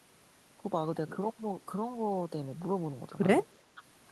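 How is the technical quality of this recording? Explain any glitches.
One glitch, near the end. Speech suppressed in double talk, from 3.68 to 3.82 s: an echo canceller likely confused the talker with loudspeaker echo while both sides spoke at once, and turned everything down. The speech sags by about 15 dB for roughly 150 ms.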